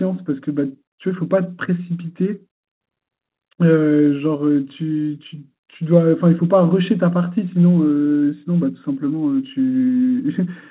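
No technical faults can be heard anywhere in this speech. It has come through a WebRTC call path whose narrowband sound, with nothing above 4 kHz, points to the G.711 mu-law telephone codec.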